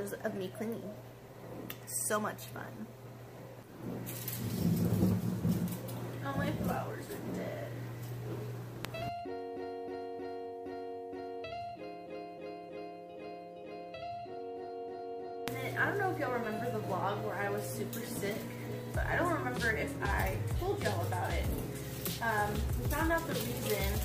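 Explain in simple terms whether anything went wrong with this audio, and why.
Nothing went wrong here; no faults can be heard.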